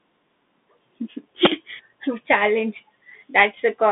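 From start to finish the speech is narrow and boxy, confined to roughly 200 Hz to 3.6 kHz, with s sounds turned scratchy, a granular hiss running beneath everything, and plainly audible grit on louder high-frequency moments. This is the Bluetooth CVSD headset codec. It encodes each sample as a single up-or-down bit with an adapting step size, which fits a 64 kbps link. Fast, loud high content outruns that step and distorts.

At 1.45 s a very short, loud burst of digital noise cuts in, lasting about 10.7 ms, which fits a 512-sample buffer. This is an uninitialised buffer. A block of memory was sent to the output before any audio had been written into it, so leftover values were played as samples and came out as a harsh blast.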